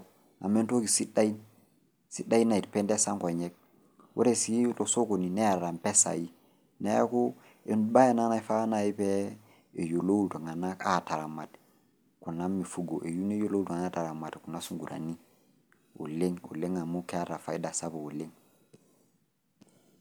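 At 14.58 s, lasting until 14.74 s, a wireless microphone noise hit interrupts the speech: the FM radio link fades as reflected signals cancel, so receiver noise surges into a brief swish of static over the speech. Unlike a digital dropout, it fills with hiss rather than falling silent.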